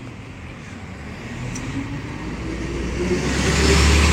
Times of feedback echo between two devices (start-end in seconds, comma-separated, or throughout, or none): none